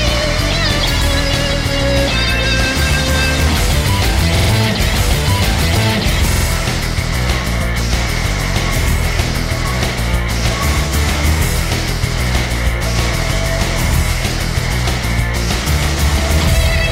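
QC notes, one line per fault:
4.37–4.51 s and 6.32–6.46 s, repeated buffer: twice, fresh audio failed to reach the output in time, so the device replayed its last block three extra times. Each block lasts about 46 ms, which fits a 2048-sample buffer. The same fragment sounds four times in a row, with a hard join at each repeat, giving a stutter of about 0.14 s. Because the repeats push the audio later rather than replacing it, nothing seems to be lost.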